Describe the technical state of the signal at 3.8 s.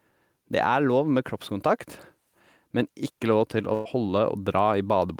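A burst of packet loss runs from 3.73 to 3.87 s. About 120 ms of speech never arrived in time, and the receiver filled the gap by extending the last sound and letting it fade, so a brief held buzz or hiss replaces the missing stretch before the speech resumes further on.

Gain pumping is also present here, as throughout the clip. The gain swings by roughly 5 dB, likely from input gain set far too high with a fast limiter clamping it back down.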